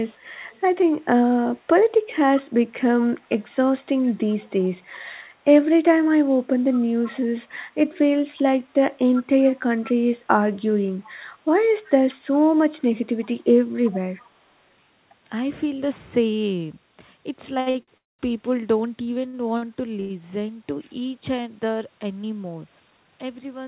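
From 0.08 to 0.61 s, 3.09 to 3.55 s, 4.02 to 4.65 s, 6.74 to 7.11 s, 9.47 to 9.92 s and 13.85 to 14.26 s, a faint copy of the speech trails the original by 377 ms. This is an echo leak, likely from a far-end loudspeaker whose sound got past the echo canceller and was sent back. It starts very quiet and grows more noticeable toward 13.85 s. The fixed 377 ms lag marks it as a returned copy rather than room reverberation, which would smear continuously from the first instant.

At 17.60, 17.70 and 17.83 s, each sound is held slightly too long for 62, 43 and 51 ms, with a faint buzzy smear. These are short stalls from a late packet. The jitter buffer ran dry, so the receiver stretched the last sound until the data arrived, then continued from the same point. Nothing is lost, which is how these differ from packet-loss dropouts, where part of the speech disappears.

From 17.98 to 18.21 s the sound stops and fades into roughly 200 ms of silence before resuming exactly where it left off. 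This is a call audio freeze, likely from packets held up on the network. It is longer than the stalls around it and ends in true quiet rather than a held buzz, yet nothing is skipped, so only a gap is added.

More short stalls follow at 19.27, 19.57 and 20.00 s, lasting 63, 51 and 92 ms. The audio is band-limited throughout, with nothing above 4 kHz, which fits a narrowband call codec.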